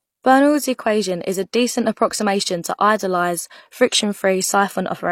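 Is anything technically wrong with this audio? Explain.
Yes. Throughout this speech clip the audio shows transcoding between lossy codecs. Nothing is present above 16.3 kHz, and the texture mixes two kinds of artefact heard together. This fits an MP3 at around 100 kbit/s that was likely re-encoded as HE-AAC at about 32 kbit/s. The second encoder spent its limited bits on the first encoder's artefacts while adding its own, so both layers are heard together. A spectrogram would show a hard ceiling at 16.3 kHz, with blotchy, patchy high bands beneath it.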